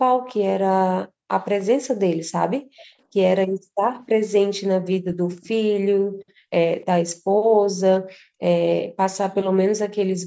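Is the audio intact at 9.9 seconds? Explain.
Yes, at 9.9 seconds the speech is intact; the call's microphone processing is working as expected there, with nothing above 8 kHz and no fault.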